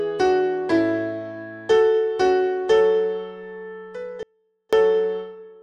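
Near the end, from 4.23 to 4.73 s, there's an audio dropout to a faint residue: the sound cuts out abruptly for about half a second, leaving only a faint leak roughly 35 dB down, likely a brief loss of the signal while the path downstream stayed live.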